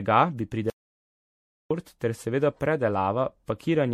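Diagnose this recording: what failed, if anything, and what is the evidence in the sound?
The speech sounds swirly, smeared and hollow throughout, with blurred attacks and nothing above 16.2 kHz. That points to the codec stage: generation loss, likely from around seven repeated MP3 encodes near 64 kbit/s, each requantising on a shifted frame grid.

From 0.70 s to 1.71 s the speech cuts to dead silence with no room tone, and about 1.0 s of it is simply gone. This is a dropout to silence, likely from the input being lost while the recorder kept writing silence.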